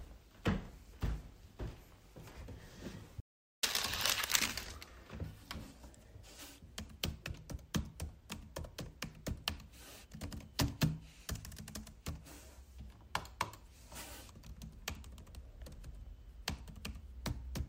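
An audio dropout to silence runs from 3.20 to 3.63 s in this recording of sounds. The sound cuts off abruptly and returns just as suddenly about 430 ms later, and the gap between is dead digital silence with no background or room tone at all. Whatever occurred during that stretch is missing. The likely cause is a brief loss of the input signal, such as a momentary disconnection or mute, while recording continued and filled the gap with silence.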